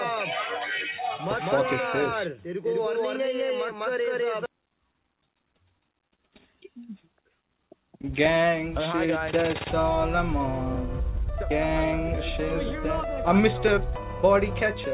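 No technical faults can be heard anywhere in this clip. The audio passes through a working call path whose narrowband coding leaves nothing above 4 kHz, which fits G.711 mu-law.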